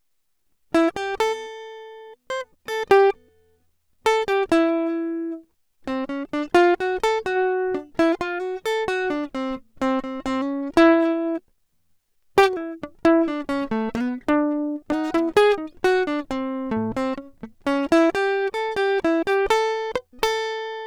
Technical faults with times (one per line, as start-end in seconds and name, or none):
2.30 damaged data in a compressed stream